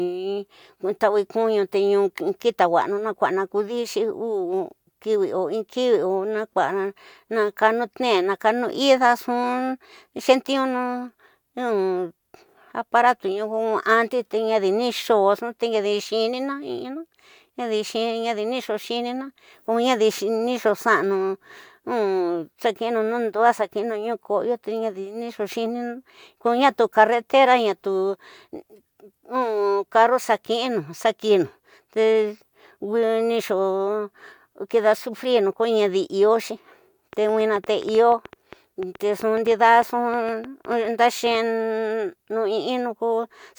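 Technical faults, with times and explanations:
37.13 to 41.36 s, train of clicks: a run of roughly thirty sharp, near-identical ticks pops out over the speech at an uneven pace averaging about 6.6 per second, peaking around 5 dB above the programme level and sounding in the gaps between phrases too. Because the clicks repeat with the same shape and keep going regardless of the audio underneath, they likely come from electrical interference or a faulty connection or power supply.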